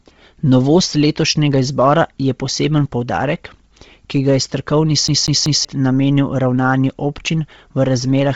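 From the start, the speech has a breathy, grainy edge and a hard ceiling, with nothing above 7.7 kHz. This is likely Bluetooth LC3 compression at a low rate, which fits 24 kbps with 7.5 ms frames. Zeroed upper bands are refilled with noise, showing as a flat cutoff and speckled, smeared energy below it on a spectrogram.

From 5.08 to 5.65 s, just after "ki ga je strokovni", a CD stuck on one turn makes a fast, even stutter. A 191 ms slice plays three times, each jump marked by a brief mute. On the waveform, identical blocks repeat with small gaps, and the spectrogram shows matching vertical stripes.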